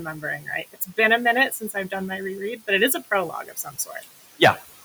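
Noise suppressor artifacts run through the whole clip. The suppressor pulls the steady room noise, which sits about 18 dB under the speech, down by about 15 dB in each band it judges to be noise, frame by frame. The background therefore dips in the gaps and swells back under speech.

Speech cut by the noise suppressor happens four times. Between 0.05 and 0.48 s, 0.73 and 0.98 s, 1.5 and 1.92 s, and 3.43 and 4.04 s, the suppressor misreads parts of the speech as noise. It turns them down by about 11, 13, 12 and 12 dB at the deepest. The affected stretches total around 150, 100, 200 and 300 ms, and those soft sounds come across as swallowed or faint.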